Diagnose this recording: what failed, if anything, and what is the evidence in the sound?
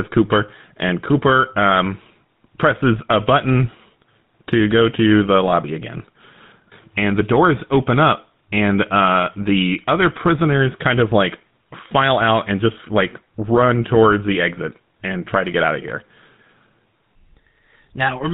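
The codec stage is the culprit here: this speech has been through the GSM full-rate codec, and it shows for the whole clip. There's a plainly audible buzzy, gravelly grain on every stretch of talking, and nothing comes through above 4 kHz. That's what you get when the vocal tract is modelled and driven by evenly spaced pulses built from a decimated excitation. It fits the 13 kbps full-rate coder.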